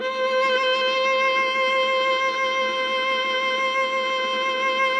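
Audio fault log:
No fault is heard anywhere in this music clip.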